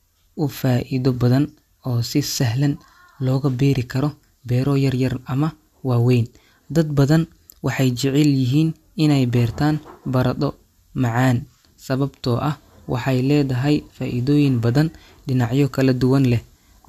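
No technical faults detected anywhere in the speech recording.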